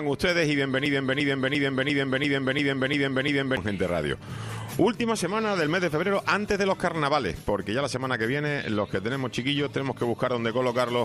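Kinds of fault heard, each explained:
Broken-record loop: from 0.86 to 3.57 s, a 0.35 s fragment repeats exactly eight times, likely from a stalled stream resending its last piece. The intended audio is lost.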